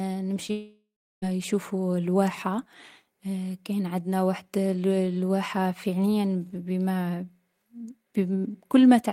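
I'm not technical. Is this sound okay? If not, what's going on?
No. At 0.47 to 0.51 s there is a short concealed packet loss: a few hundredths of a second of the call arrived too late, and the receiver patched the gap by stretching the preceding sound, leaving a brief smear in the speech.

Right after, from 0.51 to 1.24 s, the speech gives way to a fading buzz or hiss, then about a third of a second of silence, before resuming with part of it missing. The likely cause is a long network dropout, where the receiver improvised until it gave up.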